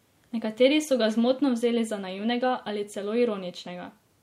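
No technical faults are audible.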